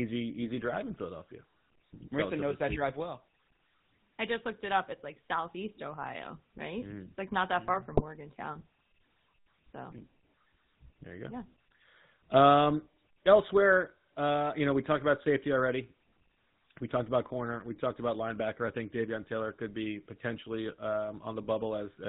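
From start to finish the speech passes through the GSM full-rate codec, which fits a 13 kbps link. The codec rebuilds the voice from a vocal-tract model driven by sparse, regular pulses and passes nothing above 4 kHz. The damage is plainly audible: the voice sounds narrow and boxed-in, with a buzzy, gravelly roughness laid over every syllable, because the coarse pulse excitation cannot carry the natural texture of the voice.

From 7.92 to 8.02 s, just after "not that far mm", GSM bit errors strike. Flipped bits reach the decoder, which points to a couple of corrupted frames at an error rate of around 1.4 percent. The decoder takes wrong filter, pitch or gain values as real, so for about a tenth of a second the spectrum bends and the level lurches. The voice briefly breaks into a squawking, gargled burst before the normal coded sound resumes.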